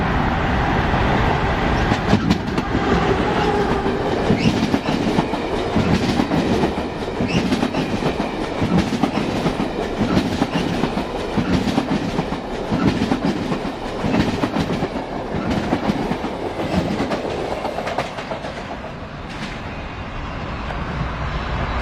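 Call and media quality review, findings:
Adaptive stream at a lower bitrate, 18.25 s to end: player switched down to a lower rendition after throughput fell. Abrupt, gapless quality drop; treble thins, nothing above 14.9 kHz, consistent with a low-bitrate HE-AAC stream.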